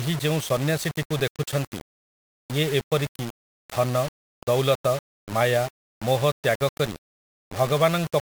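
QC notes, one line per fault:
Throughout, low bit depth without dither: the speech has a grainy, gritty distortion that tracks the voice, with quiet tails sputtering or dropping to silence, likely from rounding to about 5 bits with no dither, leaving error only around 15 dB under the signal.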